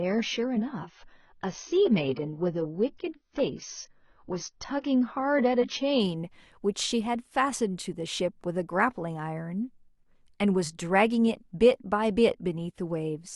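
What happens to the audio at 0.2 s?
The speech sounds dull and smeared, with nothing above 6.5 kHz, until it brightens abruptly at 6.0 s: an adaptive stream starting at a low bitrate, consistent with roughly 16 kbit/s, before stepping up.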